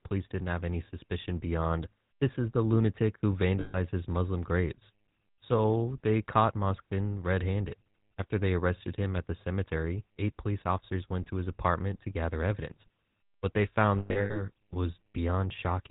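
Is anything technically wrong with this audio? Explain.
Yes. Throughout, the speech has a buzzy, gravelly roughness and a dull top with nothing above 4 kHz. This is GSM full-rate codec damage, consistent with a 13 kbps stream. The codec models the vocal tract and drives it with a sparse, regular pulse excitation, which throws away fine detail.

There are also lost GSM frames. At 3.60 to 3.77 s, just after "is the lunatic who", the sound freezes into a rough, metallic ring for about 140 ms. From 13.98 to 14.43 s, shorter rings of the same kind recur, with about 260 ms of loss scattered over roughly 360 ms and the longest gap around a tenth of a second. In each gap the decoder reused the last good frame's settings rather than producing fresh speech.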